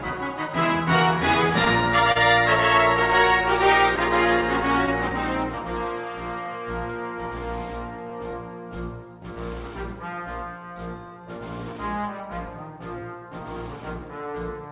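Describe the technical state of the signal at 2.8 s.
At 2.8 s, clock drift between sender and receiver is present, as throughout the clip: the sender runs about 2 percent slow, so the jitter buffer drains and short repeated fragments recur irregularly. The G.711-style band limit at 4 kHz is audible there too.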